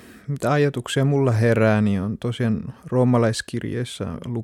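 No technical faults are audible.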